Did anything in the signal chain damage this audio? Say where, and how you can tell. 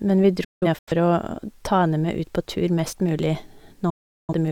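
Yes, a digital broadcast dropout at the reception stage. From 0.44 to 0.92 s the speech breaks into several short silent holes, the longest 0.17 s, then mutes solidly from 3.90 to 4.33 s. Each cut fades within 8 ms, muting cleanly rather than smearing or filling gaps like packet-loss concealment.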